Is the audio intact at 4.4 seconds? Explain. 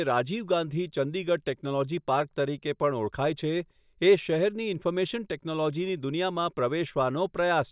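Yes, the speech at 4.4 seconds plays through cleanly, with no dropout, click, distortion or other fault at that moment.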